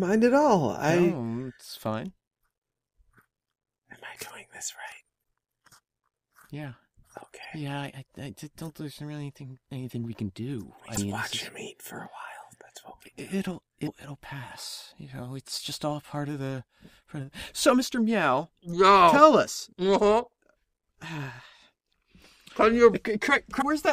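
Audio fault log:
3.39–3.41 s, 7.41–7.45 s, 10.94–10.98 s, 13.83–13.88 s, 23.58–23.62 s, damaged data in a compressed stream: brief breaks of about 30–45 ms in the sound, each a short burst of garbled output or a gap, where corrupted compressed frames were misdecoded or dropped while the decoder regained sync.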